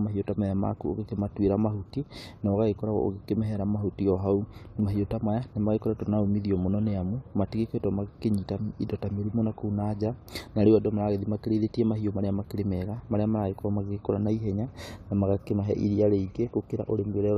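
Nothing stood out on listening to this speech recording.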